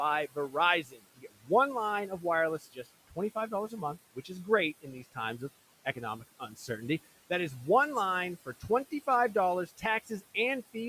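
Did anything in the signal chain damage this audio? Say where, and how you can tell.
Yes. The damage is in the call processing stage, from noise suppressor artifacts throughout. The room noise sits about 19 dB below the speech, and the suppressor pulls it down by about 17 dB between phrases, then lets it rise under speech. Codec artefacts don't track speech gaps like this.

Speech cut by the noise suppressor occurs at 0.35–1.5 s, 2.59–3.72 s, 4.82–5.41 s, 5.85–6.69 s and 9.67–10.23 s. Within each window, parts of the speech drop by about 11 to 18 dB, deepest in the first, for up to roughly half a second. Packet loss would leave gaps or clicks. Here the speech is turned down along with the background.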